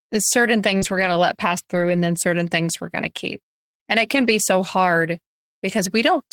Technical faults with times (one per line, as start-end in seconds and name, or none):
0.77-0.83 short concealed packet loss
0.81-1.07 lost packet rebuilt from error correction
1.73-1.95 lost packet rebuilt from error correction
4.15-4.29 lost packet rebuilt from error correction